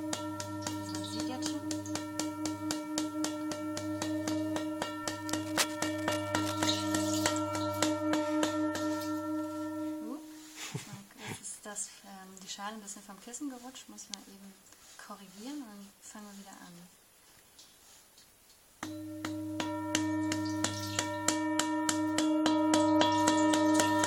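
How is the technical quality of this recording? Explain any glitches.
The recording has one audible glitch. From 5.31 to 6.65 s, a dense, uneven scratching and rustling runs over the sound, only about 5 dB below it. This is cable scratch noise, likely from a worn cable, connector or control being moved, its contact resistance jumping rapidly and injecting bursts of noise.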